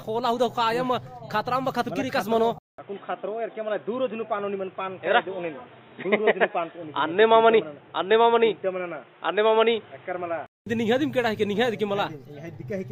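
From 2.58 s to 10.66 s the audio turns dull and boxy, with nothing above 3.8 kHz, after a 200 ms silence at the switch. It arrives with a modest level shift and a faint new background noise, then clears at 10.66 s. The likely cause is the input switched to a poorer device. A plain low-pass filter or codec bandwidth drop would not bring the gap, level jump and different noise floor all at once.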